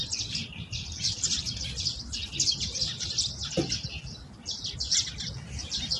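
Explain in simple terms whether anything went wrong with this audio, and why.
Low-delay AAC compression runs throughout: the sound is audibly rough and grainy, with nothing above 11.6 kHz, likely from very short, bit-hungry frames at a low bit budget.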